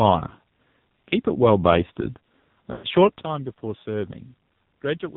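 A short speech recording squeezed through the AMR narrowband mobile codec, and hard: nothing above 4 kHz, plus a buzzy, synthetic edge that fits a low AMR-NB mode around 5.9 kbps. From 2.72 to 2.86 s you get lost AMR speech frames. The decoder stretches the last good sound and fades it over about 120 ms, roughly six frames' worth. At 3.21 s there's a sudden gain jump: speech and background drop together by about 12 dB and stay down to the end, likely from a gain change applied without a ramp.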